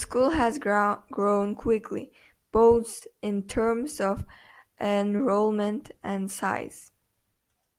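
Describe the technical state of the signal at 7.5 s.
At 7.5 s the speech signal is intact, with no audible fault at that moment.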